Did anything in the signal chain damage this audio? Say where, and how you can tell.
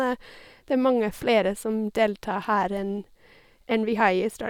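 No, nothing in the signal chain damaged this speech.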